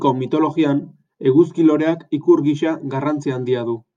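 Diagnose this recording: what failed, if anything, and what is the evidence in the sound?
Nothing in this speech recording points to a failure at any stage of the chain. No audible event marks a fault anywhere in it.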